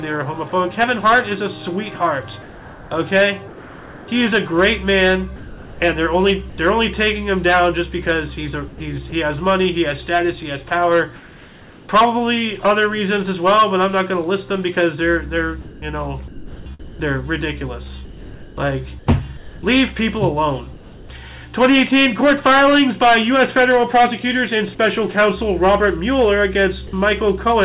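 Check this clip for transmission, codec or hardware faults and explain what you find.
Several voice-detector faults appear, heard through a narrow call path with nothing above 4 kHz, which fits G.711 mu-law at 64 kbps.

Sound chopped by the voice detector, at 2.42 to 6.58 s, 8.68 to 9.12 s and 15.62 to 21.09 s: the sound turns choppy, with two or more holes in it. About 1.6 s, 140 ms and 1.9 s respectively are replaced by steady filler noise. The likely cause is the sender's detector repeatedly switching transmission off and on, with the receiver filling the gaps with comfort noise.

Comfort noise in place of the background, at 11.16 to 11.88 s: the real background, sitting about 26 dB below the loud parts, becomes a flat, featureless hiss about 3 dB quieter. This likely happens because the sender stopped transmitting and the receiver synthesised comfort noise instead.

Sound dropped by the voice detector, at 26.87 to 26.93 s: about 50 ms of sound gives way to steady noise or near silence. 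The detector likely mistook quiet sound for background and muted it.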